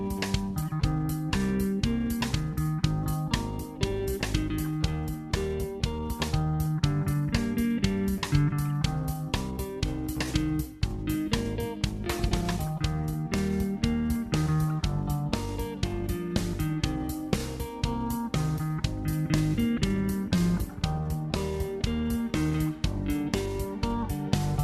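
No technical faults can be heard anywhere in the audio; the signal stays steady and intact throughout.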